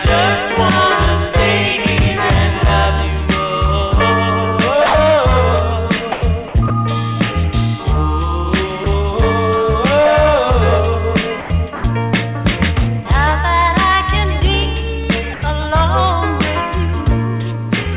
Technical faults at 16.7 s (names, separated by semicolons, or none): none